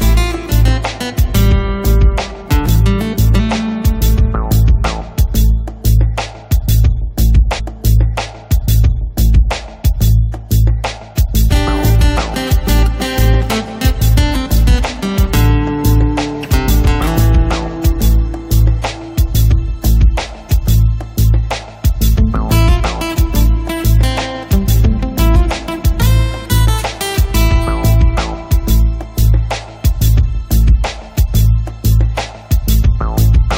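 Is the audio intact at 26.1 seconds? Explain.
Yes, the audio is intact at 26.1 seconds, with no dropout, click, distortion or other fault at that moment.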